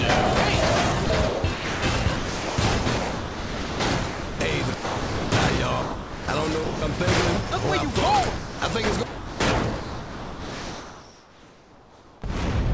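Over two stretches the sound is choppy, most likely sound chopped by the voice detector. Between 1.06 and 3.80 s about 1.8 s is swapped piecemeal for comfort noise, and between 6.64 and 7.00 s about 0.24 s is. A waveform shows the envelope repeatedly collapsing into a flat, low noise floor and returning. On a spectrogram, detailed structure alternates with smooth, featureless noise bands. The sound also drops out entirely to steady comfort noise at 4.08–4.40, 4.74–5.32, 5.82–6.28, 8.38–8.62, 9.06–9.40 and 9.80–12.22 s, consistent with sound dropped by the voice detector when the sender judged the signal to be background and stopped transmitting. Each gap appears as an abrupt cut to a uniform low-level band on the spectrogram, and as a thin, even trace on the waveform, until the sound resumes. Throughout, the call path's wideband coding leaves nothing above 8 kHz, which fits G.722 at 64 kbps.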